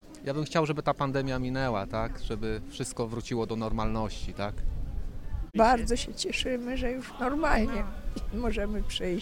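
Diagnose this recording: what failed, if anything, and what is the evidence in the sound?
Nothing failed; no fault is audible in this recording.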